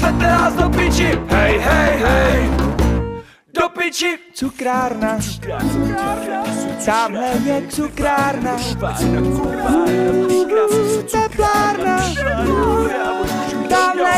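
Nothing goes wrong anywhere in the clip, so there's no technical fault to point to at any moment.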